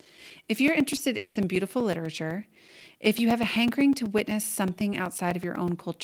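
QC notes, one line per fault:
0.05–6.04 s: periodic USB or driver dropouts. A tiny slice of audio is lost every 0.125 s, eight times a second, and replaced by silence. Something is stalling the audio path on a fixed schedule. The result is a steady train of ticks heard only while speech is present.
0.95–0.99 s: short concealed packet loss. About 20 ms of speech never arrived in time. The receiver filled the gap by extending the preceding sound, then blended back into real audio. This leaves a brief smear or wobble in the speech.
1.17–1.37 s: long network dropout. The speech turns into a stretched, fading buzz or hiss for about 0.18 s, with no true silence, then resumes with that stretch missing. This is likely a network outage that the receiver papered over by extending the last sound.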